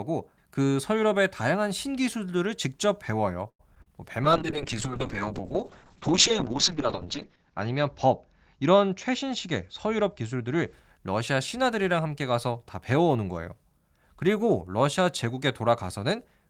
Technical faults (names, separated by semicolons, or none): short stall from a late packet; short concealed packet loss; call bitrate drop; jitter buffer speed-up